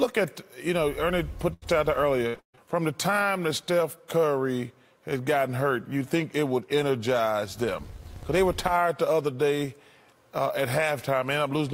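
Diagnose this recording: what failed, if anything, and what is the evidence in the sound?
Burst of packet loss, 1.53 to 1.64 s: a network fault. About 80 ms of audio never arrived in time, so the receiver stretched the last sound into a fading hold for roughly 82 ms, then playback jumps ahead with that stretch gone.

Repeated packet loss (robotic sound), 2.28 to 2.59 s: also network-side. Four closely spaced gaps, the longest 138 ms, leave about 240 ms missing. Concealment covers three quarters of the span, so the sound turns choppy as patches follow each other.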